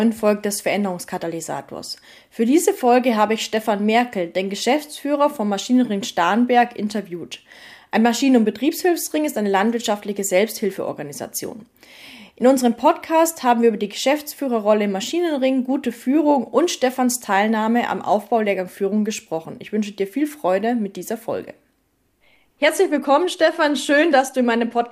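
Nothing stood out on listening to this clip.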